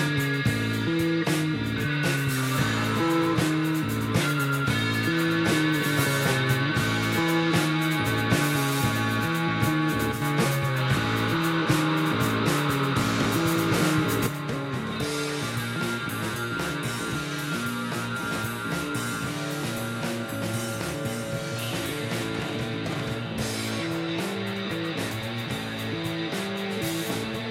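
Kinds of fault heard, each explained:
One channel drops out: the level falls abruptly by about 6 dB twice, first in a short blip from 10.12 to 10.22 s, then again at 14.27 s, where it stays down through to the end. The sound carries on, just quieter. That sudden step is what you'd get if one side of a stereo feed likely went missing before the mono sum, halving the shared material and dropping anything only on that side.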